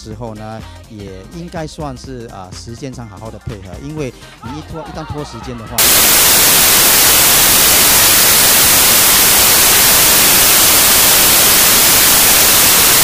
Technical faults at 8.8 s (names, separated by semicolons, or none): samples built from the wrong bytes